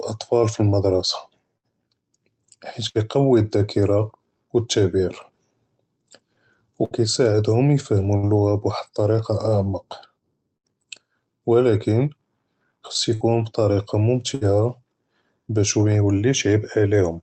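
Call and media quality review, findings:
Burst of packet loss in the speech at 1.57, 2.89, 6.85, 8.17, 10.57, 13.15 and 14.35 s, each about 90 ms long, the one at 10.57 s about 110 ms. Short held buzz or fading hiss, then a jump. About 60 ms is lost each time. Jitter-buffer concealment stretches the last sound, then resumes later. The Opus call path's 8 kHz band limit cuts off the highs.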